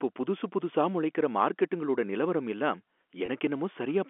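At 3.26 to 3.28 s there is packet loss with pitch repetition: about 20 ms of speech, which fits a single lost packet, went missing and was filled by repeating the last pitch period. It comes through as a brief, slightly held, buzzy sound over the G.711 telephone band of 250 Hz to 3.4 kHz.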